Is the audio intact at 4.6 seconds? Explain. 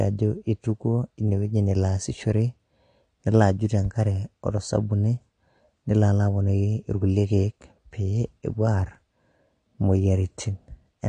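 No. At 4.6 seconds the speech sounds dull and smeared, with nothing above 9.9 kHz and a warbling, fizzy edge on sibilants, and this persists across the whole clip rather than just that moment. This is likely AAC compression: the AAC-LC coder quantises each frame's spectrum against a hearing model, and at a low bitrate, consistent with roughly 32 kbps, it drops the top band and starves the remaining detail.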